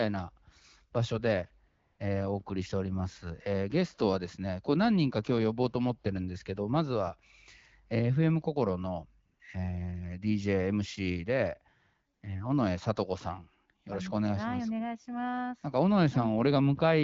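AMR comfort noise appears at 1.67 to 1.99 s, 9.25 to 9.39 s and 12.13 to 12.21 s. The phone judged the talker silent and stopped sending speech. The receiver filled each gap with smooth synthetic noise. The real background drops out, and a steady hiss switches in.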